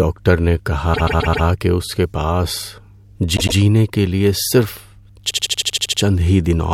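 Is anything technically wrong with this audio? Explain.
Yes, two faults are present in this speech clip.

Mains hum runs throughout: a steady 50 Hz tone at about 30 dB below the speech, leaked from the power line. On a spectrogram it shows as a constant horizontal line near the bottom.

Repeated frames cause stutters. At 0.93 to 1.45 s, just before "کہ اس کے", a 130.6 ms chunk replays four extra times. At 3.36 to 3.57 s, before "کے لیے", a 104.5 ms chunk replays twice. At 5.29 to 6.00 s, a 78.4 ms chunk replays nine times. The same compressed blocks were sent again, so the waveform shows identical copies.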